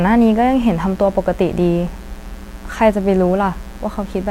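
Switching spikes from the mains supply have leaked into the signal path from the first moment to the last, a mains buzz locked to 60 Hz. The spikes arrive twice per mains cycle, 120 times a second, so the interference is a dense stack of 60 Hz harmonics reaching into the kilohertz range rather than a pure hum. It sits under the speech as a steady, raspy buzz, at roughly 20 dB below the speech.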